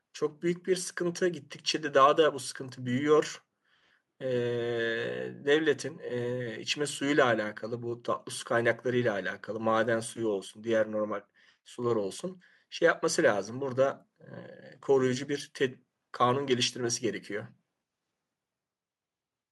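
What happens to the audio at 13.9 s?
Nothing goes wrong at 13.9 s: the speech runs on intact through that moment, with no dropout, click, distortion or other audible fault.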